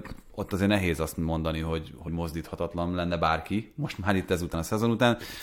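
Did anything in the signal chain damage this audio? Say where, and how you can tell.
Yes. Compressed frames were skipped at the codec decoding stage, once between 2.07 and 2.09 s, right after "nehéz azt mondani hogy" and before "mozdíthatatlan lenne bárki most", and again at 4.53 s after "bárki most már itt". Each time the speech jumps ahead by about 50 ms, which fits two missing frames of 23.2 ms.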